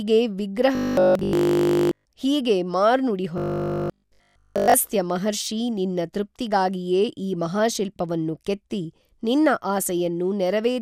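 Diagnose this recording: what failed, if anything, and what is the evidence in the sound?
Robotic sound from repeated short buffers, at the driver or buffer stage. From 0.75 to 2.05 s, before "ಹೀಗೇ ಮಾರ್ನುಡಿ", and 3.38 to 4.74 s, before "ಮಹರ್ಷೀ ನಿನ್ನ ತೃಪ್ತಿಗಾಗಿಯೇ ಈ", speech becomes a rigid 50 Hz buzz, likely a starved stream replaying one 20 ms block in place of nearly all real audio.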